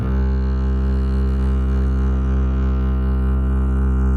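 Throughout the music a slow flanging sweep can be heard: the channels are drifting apart on separate clocks, off by around 50 ppm, reaching a fraction of a millisecond by the end. From 0.77 to 2.73 s the music drags and stutters with dozens of brief holds, each up to 30 ms. These are repeated stalls (stutter), where packets arrived late, the jitter buffer ran dry, and the last sound was extended. Nothing is lost, but about a third of that span, 615 ms in total, is filled-in sound. From 3.35 to 3.86 s the music slows to 76% speed at unchanged pitch, with stretched sounds. This is a jitter buffer slow-down: repeated pitch periods added 132 ms to rebuild the reserve.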